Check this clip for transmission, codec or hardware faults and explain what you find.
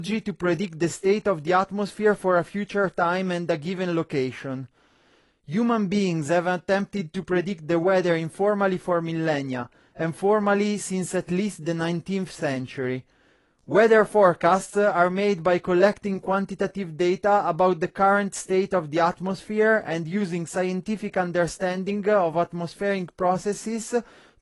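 One codec fault runs through the whole speech clip. Throughout, the sound is dull and smeared, with plainly audible damage and nothing above 11.5 kHz. The likely cause is AAC compression (AAC-LC) at a low bitrate, which fits about 32 kbps. The coder quantises each frame's spectrum against a hearing model and cuts the top band. On a spectrogram this shows as a hard ceiling at 11.5 kHz with patchy energy below it.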